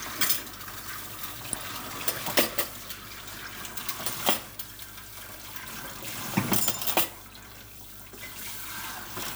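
Mains hum sits under the whole clip: a steady 50 Hz tone, roughly 20 dB below the sounds, with some low harmonics. That's power-line energy leaking in, most likely through a ground loop or a transformer sitting too close to the signal path.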